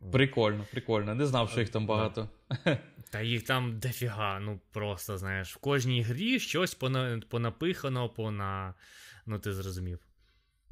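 Listening to the speech recording, nothing stood out as a technical fault at any point.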